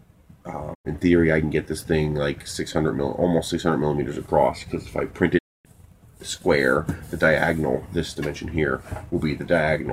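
Digital broadcast dropouts: the receiver lost valid frames and muted, so sound fades out over about 20 ms and falls silent from 0.73 to 0.87 s, and again from 5.37 to 5.67 s.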